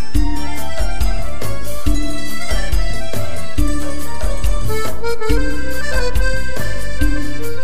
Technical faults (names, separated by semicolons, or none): DC offset